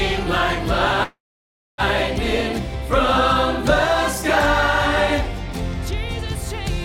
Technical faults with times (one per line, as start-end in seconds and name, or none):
1.03-1.81 call audio freeze